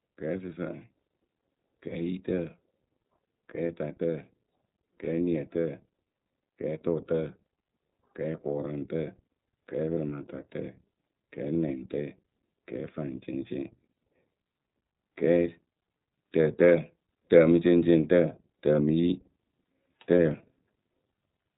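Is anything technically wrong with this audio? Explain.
Yes. Throughout, the speech has passed through the iLBC codec, which codes each frame's excitation independently, consistent with 30 ms frames. Nothing above 4 kHz survives, leaving a plainly rough, synthetic edge.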